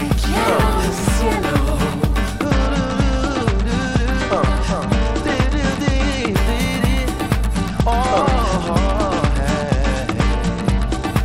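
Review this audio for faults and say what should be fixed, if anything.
Bluetooth SBC bit pool drop, from 2.45 to 6.36 s and again from 7.55 to 11.07 s. In both stretches the treble dulls and a gritty noise rises, clearing once the rate recovers. This fits the encoder cutting its bit pool from 31 to 11, around 83 kbps, so the top sub-bands get few or no bits and the rest are coarsely quantised. Keeping the link uncongested, with the phone closer and fewer competing 2.4 GHz devices, prevents it.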